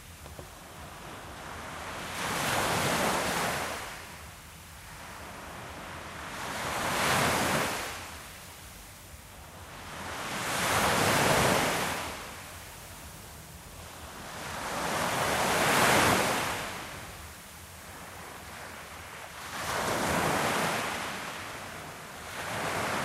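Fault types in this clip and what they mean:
Nothing stood out on listening to this sound recording.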